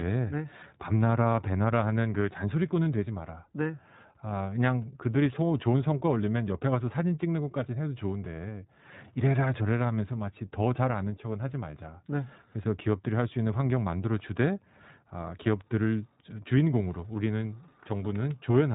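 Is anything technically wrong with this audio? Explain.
Yes. The iLBC codec's damage runs through the whole clip and is plainly audible. The speech is coded frame by frame, each short block rebuilt from its own excitation without drawing on the one before, which fits 20 ms frames at about 15.2 kbps. Nothing above 3.8 kHz survives, so sibilants and consonant edges lose their brightness and the voice sounds boxed in. The per-frame coding leaves a slightly rough, synthetic grain on the speech throughout.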